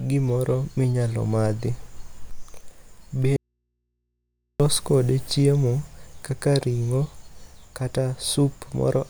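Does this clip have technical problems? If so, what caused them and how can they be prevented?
Yes. There's an audio dropout to a faint residue from 3.36 to 4.60 s: the speech cuts abruptly for about 1.2 s, leaving only mains hum roughly 55 dB down, then returns at "kode chiemo kaka ring'o". That's likely a loose connector or a cable briefly losing the source. Secure and check the connectors and cables before recording.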